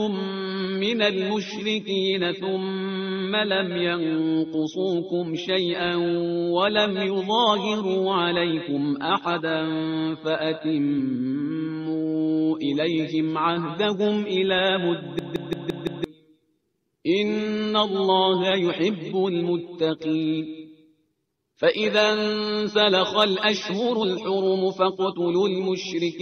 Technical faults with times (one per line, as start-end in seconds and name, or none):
15.19-16.04 system hang loop